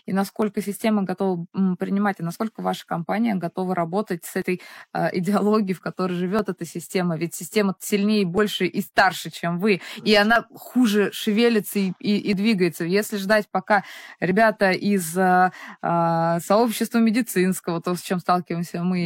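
Small skips in the speech at 0.42–0.45, 4.42, 6.39–6.43, 8.38–8.41, 10.36–10.38, 12.33–12.36 and 14.31–14.33 s come from overlap between stream segments: where 2-second segments join, a few tens of milliseconds are trimmed away.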